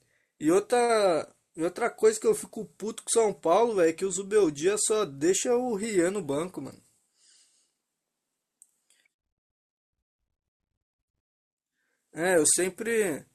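Sample clock jitter runs throughout this speech recording. Timing wobble of roughly a microsecond and a half adds a hiss about 30 dB down that roughens loud, bright passages and disappears in pauses.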